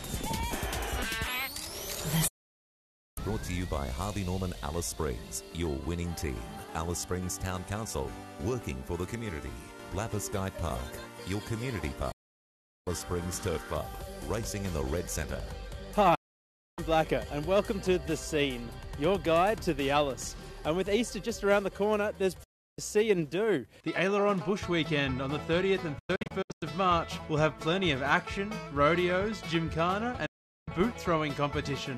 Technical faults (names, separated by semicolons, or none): digital broadcast dropout